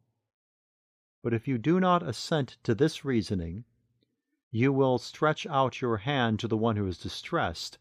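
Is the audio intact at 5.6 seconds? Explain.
Yes, at 5.6 seconds the speech is intact, with no audible fault at that moment.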